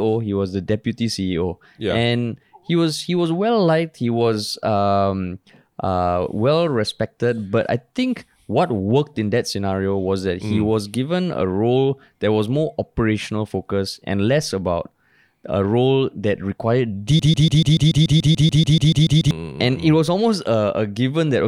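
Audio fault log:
17.19–19.31 s: broken-record loop. A 0.14 s speech fragment repeats exactly, 15 times back to back. A stalled stream likely kept resending it. The intended audio is lost.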